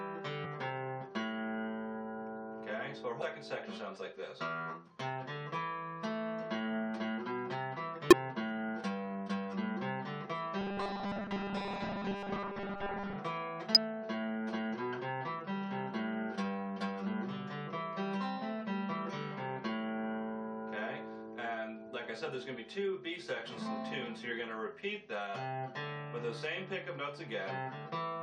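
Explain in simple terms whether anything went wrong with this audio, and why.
Parts of the compressed file were damaged, so the decoder lost its place and jumped ahead to find the next readable chunk. That causes damaged data in a compressed stream, heard as brief chirps or blips at 0.44, 3.21, 8.11 to 8.13 and 13.75 to 13.77 seconds.

From 10.59 to 13.16 seconds, new audio likely arrived too slowly, so the player kept repeating a 5 ms slice in place of most of the real sound. This robotic sound from repeated short buffers is a stiff, metallic 200 Hz buzz.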